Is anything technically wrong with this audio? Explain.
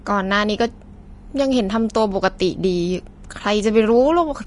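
Yes, the speech carries audible lossy-coding damage. Vorbis compression, throughout the clip: nothing is present above 10.6 kHz, and the treble beneath that limit sounds hissy and grainy. This likely comes from Vorbis encoding at a low quality setting, where the encoder trims the top of the spectrum and quantises the remaining high-band detail so coarsely that it turns into noise of similar energy. The damage is plainly audible, with roughened tones and smeared consonant onsets, which fits a low bitrate of around 34 kbps.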